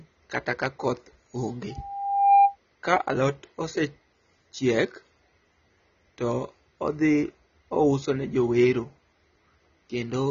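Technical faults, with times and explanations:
throughout, AAC compression: nothing above 6.9 kHz and plainly audible codec damage, which fits AAC-LC at a low bitrate near 24 kbps, the likely cause.
1.70 to 2.56 s, loudspeaker feedback squeal: after "kata ka koth onge", an 798 Hz tone swells over roughly 0.7 s to about 10 dB above the speech, as microphone-loudspeaker loop gain exceeds one.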